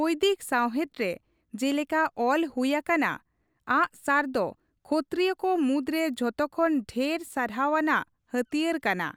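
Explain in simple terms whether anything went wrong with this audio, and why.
Nothing went wrong with this recording. There are no technical faults to point to anywhere in it.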